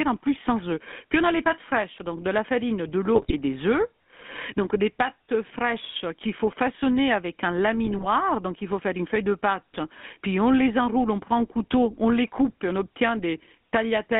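Throughout, the speech carries the buzzy, gravelly roughness of the GSM full-rate codec, consistent with 13 kbps coding: a vocal-tract model driven by sparse regular pulses. The band runs from 200 Hz to 3.5 kHz, so a spectrogram shows nothing above 3.5 kHz and smeared harmonics.

From 3.15 to 3.33 s and again from 7.86 to 8.07 s, GSM bit errors corrupt the decoder's filter, pitch and gain values. Each burst sounds like squawks, pops and gargling, and would appear as level spikes in the waveform and warped, blotchy frames on a spectrogram.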